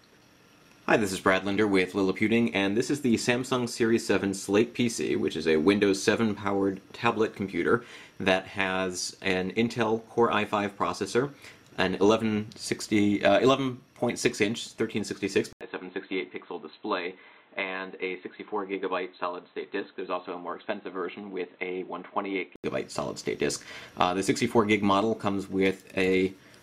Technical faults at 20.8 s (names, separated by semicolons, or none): input switched to a poorer device